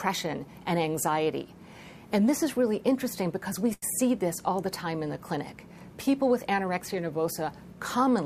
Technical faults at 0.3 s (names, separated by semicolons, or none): none